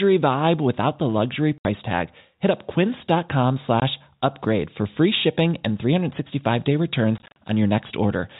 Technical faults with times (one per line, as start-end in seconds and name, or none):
1.58-1.65 packet loss filled with silence
3.80-3.82 packet loss filled with silence
7.18-7.36 packet loss filled with silence